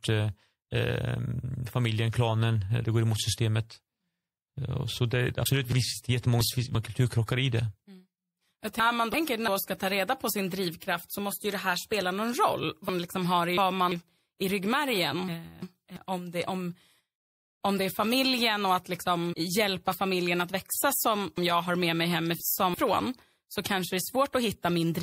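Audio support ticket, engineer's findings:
Encoder starved of bits, likely MP3 compression at a low rate, consistent with about 64 kbps: watery swirl and smeared attacks audible throughout the speech.

Chunks out of order: audio blocks of about 0.34 s written late by one to three positions, so sections replay misplaced with hard joins. At 5.72–6.75 s, 8.80–9.48 s (before "ska ta reda på"), 12.89–13.92 s, 15.28–15.96 s (before "om det om") and 21.38–22.74 s (after "familjen att växa som").

Damaged data in a compressed stream at 19.29–19.34 s: corrupted frames make the decoder lose sync and resync, heard as a brief blip.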